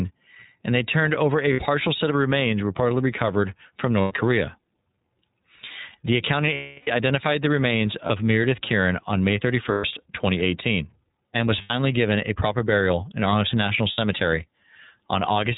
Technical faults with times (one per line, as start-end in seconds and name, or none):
0.00-15.58 iLBC codec
1.53-1.60 lost iLBC frames
4.02-4.13 lost iLBC frames
6.54-6.88 lost iLBC frames
8.06-8.11 lost iLBC frames
9.71-9.85 lost iLBC frames
11.61-11.71 lost iLBC frames
13.92-13.99 lost iLBC frames